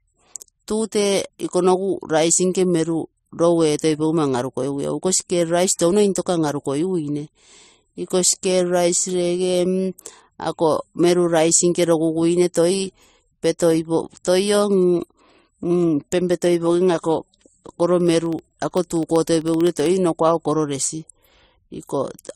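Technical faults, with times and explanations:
Throughout: transcoding between lossy codecs. Smeared, swirly artefacts from two codecs layer together, nothing above 14 kHz, likely MP3 re-encoded to AAC-LC at similarly low bitrates.
18.01 to 19.86 s: periodic USB or driver dropouts. Ticks repeat every 64 ms, about 30 of them. Each is a sub-millisecond silent gap, heard only while sound is present.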